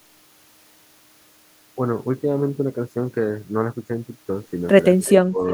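From 5.04 to 5.12 s, a brief echo leak: a faint copy of the speech returns about 363 ms late, well below the direct voice. The far end's echo canceller likely failed to remove its loudspeaker pickup. The repeat's fixed lag distinguishes it from room reverberation.

From 5.14 to 5.46 s, the speech is suppressed in double talk. It drops in pieces, totalling around a fifth of a second and at deepest falling by roughly 25 dB, likely because an echo canceller misread overlapping talk as echo. Unlike packet loss, the level dips rather than going silent.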